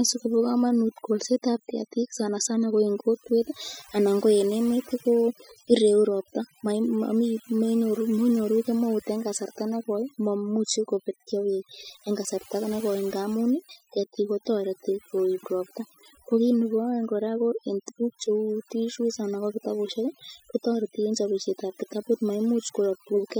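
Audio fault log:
Throughout: overdone noise removal, with a dropped background full of twinkling specks, as aggressive noise reduction gated frequency bands near its noise estimate.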